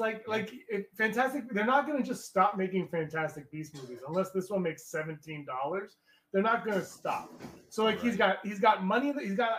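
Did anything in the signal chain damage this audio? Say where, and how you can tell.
No, nothing along the chain has left an audible mark on this audio at any stage.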